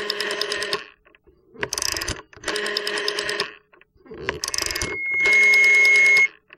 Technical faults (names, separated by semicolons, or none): loudspeaker feedback squeal